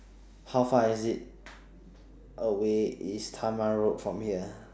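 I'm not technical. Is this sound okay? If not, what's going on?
Yes, this speech recording has no audible technical faults; the signal holds steady with no dropouts, glitches or distortion.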